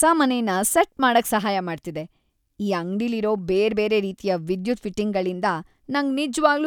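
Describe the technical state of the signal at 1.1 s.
At 1.1 s the speech signal is intact, with no dropout, distortion, glitch or other fault audible at that moment.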